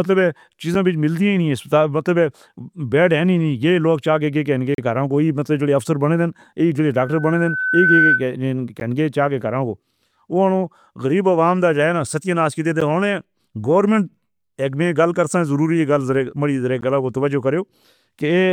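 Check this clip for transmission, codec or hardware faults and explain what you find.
Two kinds of fault are audible in this speech.

Short, hard-edged silent holes cut into the audio at 0.75 s, 4.75 to 4.78 s (between "لوگ چاہے کسی" and "دا راں"), 8.80 s (just before "چا کے"), 12.81 s and 16.81 s. They last about 6 to 37 ms and recur every 4 s. This is a gap between stream segments: consecutive 4-second segments' timestamps don't quite meet, and the player pads the gap with silence.

From 6.98 to 8.24 s, a steady 1.5 kHz tone swells over about a second to roughly 5 dB above the speech. This is loudspeaker feedback squeal: the microphone picks up its own loudspeaker, and at that frequency the loop gain exceeds one, so the tone keeps building.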